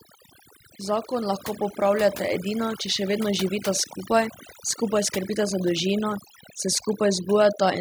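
Overdone noise removal runs through the whole speech clip. The noise reduction was set so aggressive that individual frequency bands near its noise estimate are pulled almost to nothing, taking the quieter parts of the voice with them. The background drops and breaks up into twinkling, chirpy specks. Those isolated tonal specks set it apart from a plain low-pass or a noise gate, which would dull the sound or cut the background as a whole.

From 0.85 to 3.52 s there is automatic gain rising. The gain control judged the input too quiet and raised its gain step by step, by about 6 dB over those 2.7 seconds. Voice and the residual background swell together, smoothly, so the change reads as the whole signal creeping louder. A speaker moving closer would shift the voice's tone and leave the background level alone, and a fade applied in editing would not track the input level this way.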